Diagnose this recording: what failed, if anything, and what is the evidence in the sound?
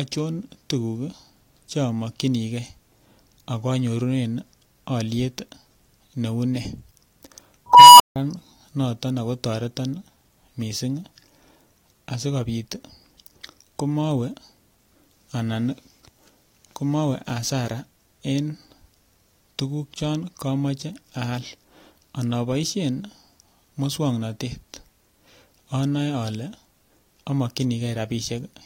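Unstable filter at 7.67 to 8.16 s, in the call-processing stage. A tone near 1 kHz swells over 0.32 s into a clipped squeal, then the output cuts to silence for 0.16 s. A recursive filter with bad coefficients diverged, overflowed and was reset.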